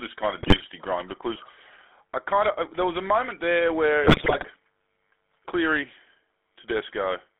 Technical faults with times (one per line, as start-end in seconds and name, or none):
0.00-7.40 GSM full-rate codec
0.38-0.62 GSM bit errors
4.04-4.45 GSM bit errors